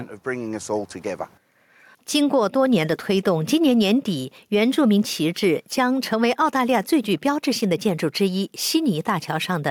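Input gain was likely set too high, so a fast limiter clamps every loud sound throughout: gain pumping, with the gain swinging about 5 dB.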